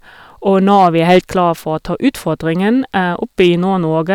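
A gain stage is driven past its ceiling, so speech peaks are sliced flat: hard clipping from 0.56 to 1.48 s, overloaded by about 7 dB, gives harsh fuzz on loud syllables; a briefer bout at 3.40 to 3.49 s, about 2 dB over, adds a short crackle.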